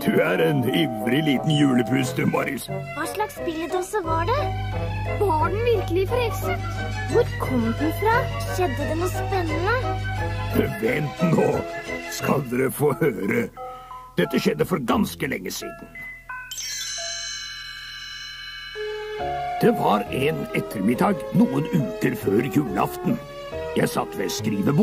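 From 4.05 s to 10.71 s a mains hum sits under the sound: a steady low tone at 50 Hz with some low harmonics stacked above it. Power-line current is leaking into the signal path, most plausibly through a ground loop or a transformer close to the cabling. The hum is strong, only a few dB below the wanted signal, so it is plainly audible throughout that stretch, then stops.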